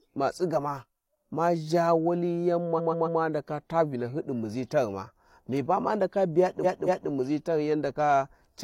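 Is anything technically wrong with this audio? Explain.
Yes. There are repeated frames in this speech. From 2.74 to 3.16 s, a 139 ms block replays three extra times. From 6.60 to 7.06 s, a 232 ms block replays twice more. Compressed frames were sent more than once, so the decoder replays them. Each is a stutter, adding about 0.42 and 0.46 s.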